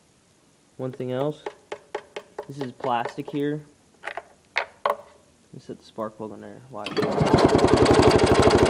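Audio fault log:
throughout: resampler restarted on every block. Faint ticks recur at 10 Hz, one every 100 ms, only while sound is present. Each block was converted without its neighbours' samples, which fits a 24 kHz to 48 kHz upsampler, leaving an error at every edge. On a spectrogram they appear as thin vertical lines spaced 100 ms apart, and on the waveform as small kinks at each block boundary.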